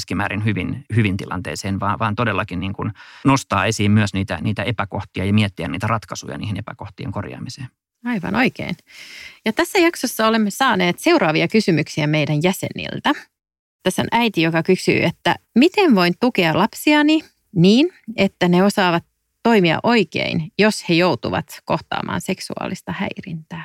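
No faults can be heard at any point in this speech recording, so there is nothing to log against it.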